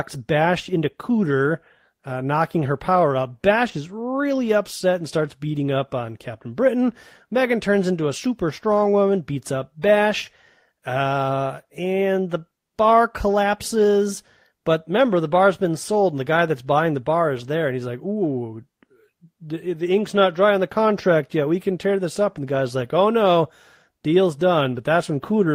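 No technical faults can be heard anywhere in the speech.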